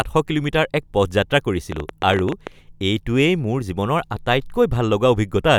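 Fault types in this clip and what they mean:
Train of clicks, 1.72 to 2.48 s: about ten similar pulses at an uneven pace averaging 14.8 per second, peaking around 10 dB above the speech and ticking audibly over it, likely from electrical interference or an interface dropping out intermittently.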